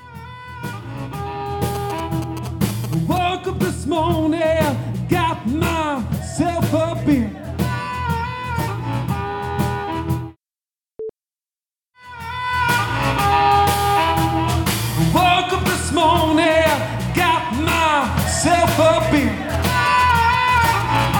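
Galloping dit-dit-dit of short 217 Hz buzzes, roughly 10 dB below the sound, from 1.75 to 3.18 s and from 19.54 to 21.06 s are GSM signalling bursts: a nearby 2G phone's radio pulses, rectified by the audio circuitry.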